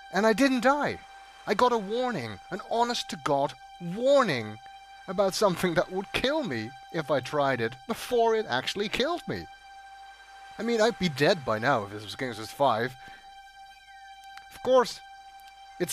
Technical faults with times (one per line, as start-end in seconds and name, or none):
none